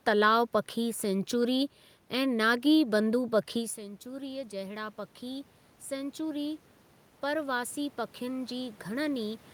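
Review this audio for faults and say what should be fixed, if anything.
Automatic gain rising from 3.53 to 6.7 s: the level control lifted gain about 5 dB after the input fell about 15 dB, so speech and room noise swell together. This follows the talker moving away at around 3.5 s; a slower, capped gain rise or steadier mic distance would prevent it.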